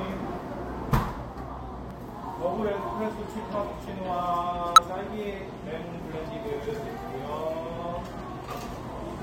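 At 1.91 s and again from 4.76 to 4.79 s, compressed frames are skipped. Frames of the encoded audio never reach playback, so the sound jumps ahead by roughly 20 ms each time.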